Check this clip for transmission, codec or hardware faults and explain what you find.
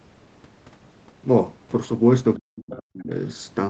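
Two faults appear, both near the end of the speech, where the sound cuts off at 8 kHz as expected on a call path.

From 2.37 to 3.12 s the speech sinks by as much as about 40 dB, across roughly 0.7 s. This is likely speech suppressed in double talk: the echo canceller couldn't separate the talker from the loudspeaker echo and turned both down. A waveform shows the envelope collapsing, and a spectrogram shows the harmonics fading to near-blank.

From 2.71 to 2.81 s, a faint second voice is heard about 20 dB below the speech. This is likely the other side's voice leaking through, because the canceller failed to remove the loudspeaker signal from the microphone. On a spectrogram it appears as a weak, separate band of harmonics within the dip.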